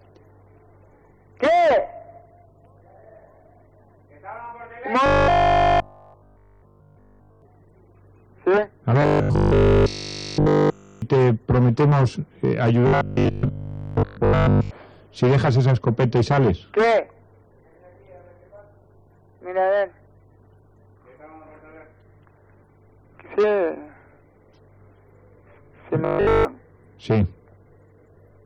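Audio likely arrived too seldom, so playback looped a short stretch, which fits a 20 ms buffer. The result is robotic sound from repeated short buffers: a rigid 50 Hz metallic buzz at 5.06–7.42 s, 9.02–11.02 s, 12.87–14.71 s (less completely) and 26.05–26.45 s.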